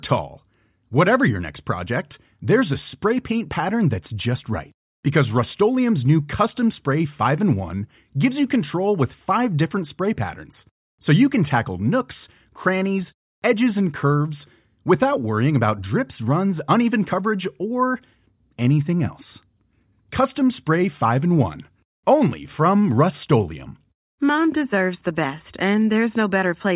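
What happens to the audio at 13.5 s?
Nothing goes wrong at 13.5 s; the speech carries on intact through that moment.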